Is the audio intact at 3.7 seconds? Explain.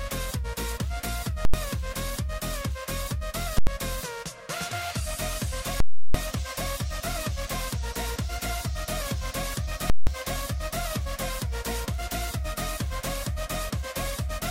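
No. Just before 3.7 s, from 3.58 to 3.67 s, invalid numbers at full scale strike. A calculation produced infinite or invalid values, pinning the output to one extreme value for about 85 ms, which fits a 4096-sample block. The result is a loud, harsh bang.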